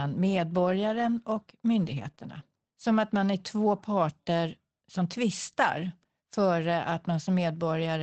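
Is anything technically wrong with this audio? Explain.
Yes, there are two kinds of packet-loss damage, both right after "medborgaren och". The clip came through an Opus call link that tops out around 8 kHz and sounds like a fairly modest bitrate, in the region of 24 kbps.

First, from 1.67 to 2.09 s there's a lost packet rebuilt from error correction, about 220 ms of it, which fits roughly a dozen 20 ms packets going missing. There's no gap because each following packet carried a cheap low-bitrate backup of the lost one, and the decoder played those backups instead. You hear that stretch go grainier and noisier, a bit rough, but continuous.

Then come two short concealed packet losses back to back, at 2.11 to 2.15 s and 2.15 to 2.19 s, each about 20 ms. These packets had no backup. The receiver papered over each hole by carrying the last bit of sound forward, either extending its pitch or filling in with shaped noise, and then crossfaded back into the real signal. 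Each one comes across as a tiny smear or wobble just as the rough patch ends, so the whole region sounds briefly unsettled.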